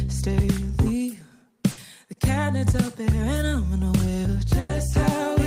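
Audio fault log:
1.71 to 1.79 s, burst of packet loss: about 60 ms went missing in transit, so the receiver stretches the last bit of sound and fades it down. That leaves a brief smeared tail, then the audio jumps ahead with that stretch gone.
4.59 to 4.71 s, burst of packet loss: same thing, but longer at about 100 ms. The held-over sound hangs and decays further before playback picks up again further along.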